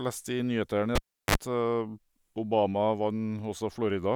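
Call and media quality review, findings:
Cable pulled and plugged in, 0.95–1.35 s. Pop, about 350 ms dropout, 47 ms of 50 Hz mains buzz during partial contact, second pop. Live connector disturbed.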